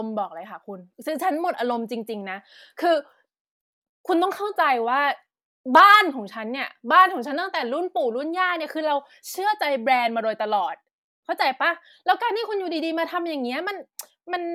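Nothing in this speech recording stands out as a technical fault, so there's no problem to point to at any moment in it.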